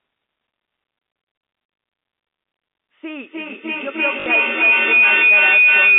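At 1.76 s the network dropped packets and the receiver filled the gap by replaying the last one it had. This packet loss with last packet repeated lasts 40 ms, which fits two 20 ms packets. The sound briefly turns into a robotic stutter.

From 3.06 s to the end, two devices in the same room are on the call. The path from loudspeaker back into microphone gains level on each trip and causes feedback howl. A tone around 3 kHz, inside the 200 Hz to 3.6 kHz telephone band, builds to about 15 dB above the speech, with a loop delay of roughly 300 ms.

At 4.20 s, under the howl, the same repeated-packet fault returns for 60 ms, consistent with three packets, and makes a slightly longer buzzing stutter.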